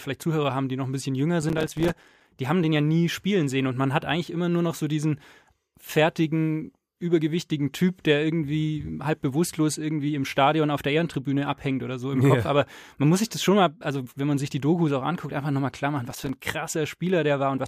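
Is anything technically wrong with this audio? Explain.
Yes, there's processor overload crackle in two spots: from 1.42 to 2.29 s, then a shorter patch from 16.11 to 16.36 s. The machine couldn't fill its small audio buffers (each only a few milliseconds long) on time, so lots of them came up empty in a row and dropped out to silence. All those hard-edged micro-gaps chop up the speech into a gritty, tearing crackle that stops once the load clears.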